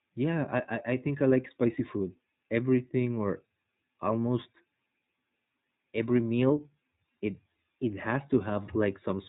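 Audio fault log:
Throughout, iLBC codec: the speech is band-limited, with nothing passing above about 3.8 kHz, and carries a plainly audible rough, slightly synthetic edge. Each short block, consistent with 20 ms frames, has its excitation coded on its own rather than predicted from the block before, so fine detail in the voice is approximated afresh every frame and comes out coarse. The degree of damage points to a low rate near 15.2 kbps.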